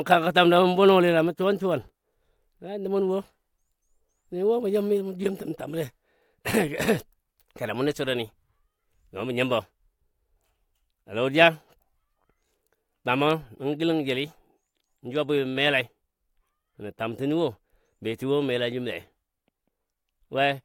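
Across the whole speech recording the signal stays intact, with no audible technical faults at any point.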